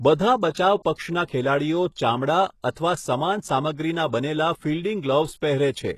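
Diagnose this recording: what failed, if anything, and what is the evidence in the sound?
HE-AAC compression, throughout the clip, at the codec stage. Nothing in this speech sits above 12.3 kHz, and the upper band has the synthetic, metallic brightness of spectral band replication, with sibilants coming out gritty and lispy. The codec damage is plainly audible, which points to a very low bitrate, around 16 kbps, and this is likely an HE-AAC encode. At that bitrate only the lower spectrum is truly coded, and the treble is regenerated by copying lower bands upward, so its harmonics never line up with the real ones.

Pre-echo, at 0.83 to 0.85 s (24 ms) and at 2.71 to 2.76 s (54 ms), also from the codec. At both points a short smear of hiss arrives just ahead of a sharp onset, and the onset itself sounds softened. The transform codec spread its quantisation noise evenly across each block. Because these attacks landed late in their blocks, noise scaled to the loud attack also filled the quiet gap before it.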